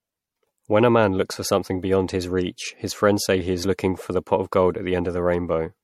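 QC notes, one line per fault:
Throughout: generation loss. Swirly, hollow, smeared speech with blurred onsets and nothing above 16.6 kHz, worse than one 64 kbit/s MP3 pass would give, likely from several re-encodes.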